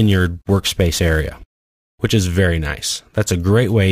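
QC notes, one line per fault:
0.0 to 1.5 s, sample clock jitter: the converter's clock wanders, so each sample is captured a little early or late at random, by something on the order of 10 microseconds. The timing error turns into an amplitude error wherever the waveform is changing fastest, leaving a noise floor only about 25 dB under the signal. It is heard as a gritty hiss that swells on loud, bright passages and drops away when the sound goes quiet.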